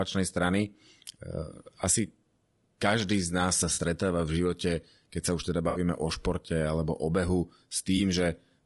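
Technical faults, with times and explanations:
Throughout: low-delay AAC compression. The speech has the rough, grainy texture of a low-delay codec working at a low bitrate, likely AAC-ELD at around 32 kbps. At this low bitrate its coarse quantization leaves noise filling the gaps between the pitch harmonics, and the upper band sounds thin and synthetic. The damage is plainly audible across the whole clip rather than confined to particular passages.
3.73 to 3.79 s, 5.69 to 5.79 s, 7.97 to 8.00 s: AAC frame loss with concealment. Lost frames leave gaps of about 40 ms, 60 ms and 20 ms, which fits runs of 20 ms frames. The decoder patches each gap by reusing the last good spectrum, so these spots come out as brief smeared, noisy patches instead of dropouts. The first falls just before "v živote". The second sits between "sa už teda" and "o športe alebo" and is the longest.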